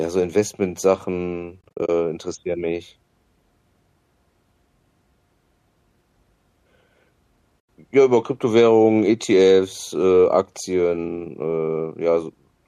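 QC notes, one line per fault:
1.61–1.89 s, AAC frame loss with muting: the speech breaks into a scatter of soft-edged holes, none longer than a few tens of milliseconds and about 160 ms missing in all, right before "interessieren mich". The lost frames' spectrum is set to zero, and the overlapping windows fade the sound out and back in. The short holes fit the roughly 10 ms frames of low-delay AAC, likely at 64 kbps, whose coding grain is light here.
7.60–7.69 s, AAC frame loss with muting: a single, cleaner gap of about 90 ms. The speech fades out and returns smoothly, because the decoder mutes the lost frames and the window overlap tapers the edges on either side of the hole.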